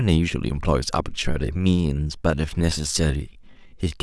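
From 1.03 s to the end, a time-stretched section slows the speech to about 0.74 speed without lowering pitch, likely from stretching software; unlike tape drag, pitch holds while phrasing drags.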